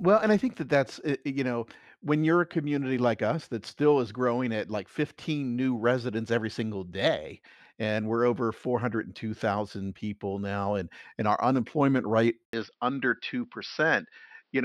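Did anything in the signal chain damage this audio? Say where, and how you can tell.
Yes. Right after "and our unemployment rate", at 12.45 s, the sound drops out for about 80 ms and returns duller and boxier through to the end. Nothing now reaches above 5.8 kHz, and a faint new noise floor sits roughly 50 dB under the speech, though loudness stays about the same. This is likely an input switched to a poorer device at the driver level: the system swapped its input mid-recording, and the replacement passes a narrower band with its own noise.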